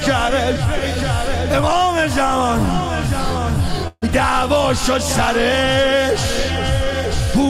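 At 3.87 s the sound stalls and smears into a short fading buzz for about 145 ms, then drops out briefly before resuming at 4.04 s with nothing lost. This call audio freeze likely came from delayed packets draining the jitter buffer, adding a 145 ms gap.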